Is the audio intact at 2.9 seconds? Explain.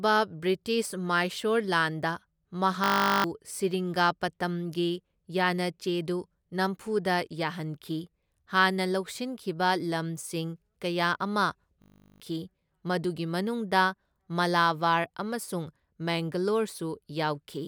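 No. From 2.84 to 3.24 s the speech gives way to a steady, mechanical buzz at 50 Hz, and roughly 0.4 s of the real audio never comes through. This is a system hang loop. The computer or its audio driver stalled, but the sound hardware kept replaying the same 20 ms stretch of its ring buffer. That slice repeats exactly 20 times, and such a short loop repeated back-to-back fuses into a tone at the loop rate.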